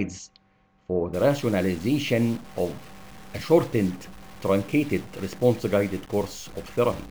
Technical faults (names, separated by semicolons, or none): stuck bit